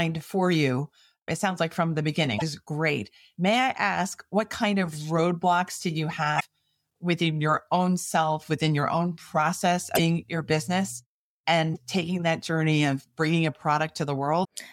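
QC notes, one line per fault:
2.37–2.42 s, 6.36–6.42 s, 9.94–10.00 s, 11.72–11.78 s, 14.41–14.45 s: damaged data in a compressed stream. Each 46–58 ms burst is a chirp, squawk, click or short hole where the decoder misreads corrupted frames and loses sync. On a spectrogram it appears as a short broadband smear, and on the waveform as a jagged, discontinuous block.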